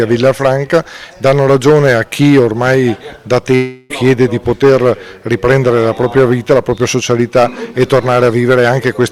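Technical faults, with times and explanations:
3.55 to 3.92 s, long network dropout: the sound turns into a buzzy, fading continuation of what preceded it for 0.34 s, never reaching silence, then resumes with that stretch missing. Likely lost packets, with the receiver stretching the last sound over the gap.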